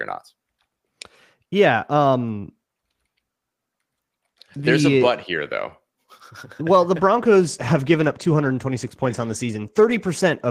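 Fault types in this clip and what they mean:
call bitrate drop: from just after "well the" onward, the audio turns rough and muffled, pointing to 40 falling to 16 kbps; spectrogram loses upper bands.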